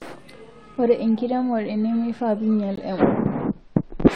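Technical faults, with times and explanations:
0.76 s and 2.76 s: gap between stream segments. Two hard-edged holes of silence, about 4 ms and then 18 ms, fall exactly 2 s apart, matching the 2-second segment boundaries. Each segment's timestamps start slightly after the previous one ends, and the player pads the difference with silence. Unlike a packet dropout, nothing is missing: the sound resumes where it stopped, so the timeline is stretched rather than cut.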